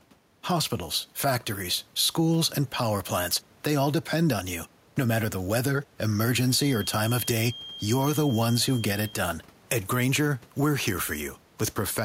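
Gain pumping runs through the whole recording, likely from a microphone gain set far too high with a fast limiter clamping down on every loud syllable. The gain swings by roughly 5 dB, leaving the level squashed and breathing.

From 6.46 to 9.22 s, a feedback whistle appears, likely because the loudspeaker-to-microphone loop is sitting right at the edge of feedback. A thin, steady 3.2 kHz tone, about 20 dB below the speech, hangs behind it and swells and fades slowly in level without building up.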